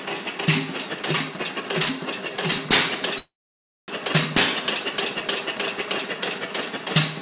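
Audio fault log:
3.18–3.90 s, call audio freeze: the sound trails into a fading buzz or hiss, then silence, picking up where it stopped 0.7 s later, likely because late packets emptied the jitter buffer.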